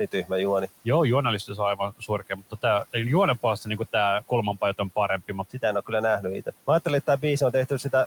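The noise suppressor mistook parts of the speech for background and pulled them down along with the room noise, which sits about 21 dB below the speech. This speech cut by the noise suppressor first hits from 0.12 to 0.32 s, dipping about 15 dB. It recurs from 1.47 to 2.94 s, dipping about 18 dB for about half a second in total, and from 3.42 to 7.85 s, dipping about 16 dB across roughly 0.7 s. Word edges and soft sounds come out swallowed and faint.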